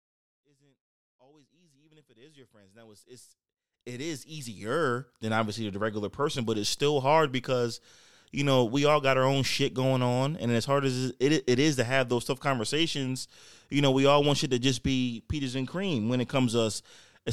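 No technical faults are present in this speech clip.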